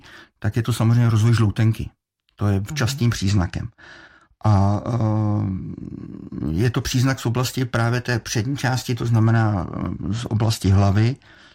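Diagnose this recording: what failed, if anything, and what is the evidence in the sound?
The codec stage failed here, specifically a Bluetooth SBC bit pool drop on the wireless link. From 3.16 to 5.85 s, and again from 9.25 s after "té přední části to" through to the end, the speech loses its top end and picks up a gritty, grainy noise. The encoder was starved of bits, so the upper sub-bands went nearly empty and the rest were coarsely quantised. That sound fits the bit pool falling from 31 to about 13, around 94 kbps, on a congested link.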